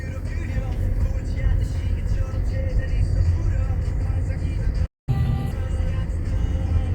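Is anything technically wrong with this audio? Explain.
Yes, there are two related faults.

A playback stall runs from 4.86 to 5.09 s. The player was likely starved of data or blocked, so output cut to silence for about 0.21 s. The sound stops abruptly mid-flow, leaves a clear gap, then resumes.

Catch-up at higher speed follows at once, from 5.09 to 5.51 s. The player resamples its backlog to recover the lost time, running at 1.5 times normal speed. The audio sounds hurried and shifted up by roughly seven semitones, then drops back to normal pitch and pace.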